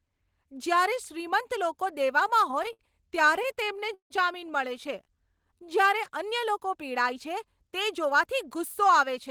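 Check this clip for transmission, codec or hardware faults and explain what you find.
Three network-related faults affect this speech clip: a run of repeated stalls, then a jitter buffer slow-down, and near the end a jitter buffer speed-up.

From 2.51 to 4.12 s there are repeated stalls (stutter). Packets kept arriving too late, so the jitter buffer ran dry 15 times. Each time the receiver stretched the last sound to bridge the gap, about 355 ms in total, or 22% of that stretch. The longest hold was 161 ms. Nothing is lost, but the speech halts and drags. On a spectrogram the fills show as smeared, frozen harmonic bands, and the longer ones fade in level on the waveform.

From 4.89 to 5.98 s a jitter buffer slow-down plays the speech at about 92% speed. The buffer was refilling its reserve by repeating single pitch periods and fragments of pauses, which added 98 ms. The pitch stays put, but syllables sound drawn out. 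On a spectrogram, vowel harmonics run longer than their neighbours at the same frequencies. On the waveform, near-identical cycles repeat back to back.

From 8.04 to 9.29 s a jitter buffer speed-up runs the speech at about 103%. Too much audio had built up, likely after delayed packets arrived together, so the receiver trimmed short pitch-period pieces, roughly 40 ms in all. The speech runs a little faster at unchanged pitch. On a spectrogram, formant transitions and vowels are compressed in time. On the waveform, small cycle-length jumps mark where pieces were cut out.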